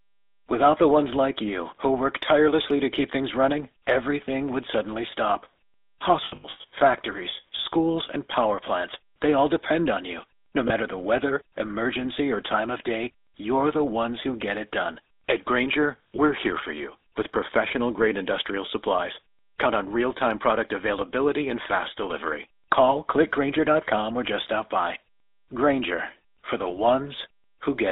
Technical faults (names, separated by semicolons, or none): GSM full-rate codec; lost GSM frames